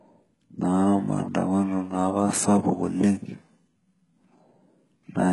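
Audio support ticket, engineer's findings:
Gritty, metallic sibilance throughout; nothing above 11.5 kHz. Likely HE-AAC compression: treble rebuilt by spectral band replication, pointing to a bitrate near 12 kbps.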